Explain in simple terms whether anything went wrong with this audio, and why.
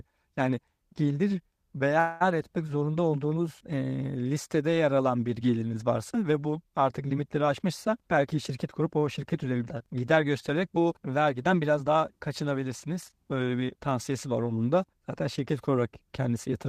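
At 1.99 to 2.23 s, just before "etmek zorunda olduğunuz e", a call audio freeze stretches a fading buzz over about 0.21 s, likely from packets delayed in transit. After "ve bu artık limitleri", from 7.48 to 9.81 s, a jitter buffer speed-up trims about a fifth of a second, so the speech runs 9% faster until "gider göstererek bu vergiden".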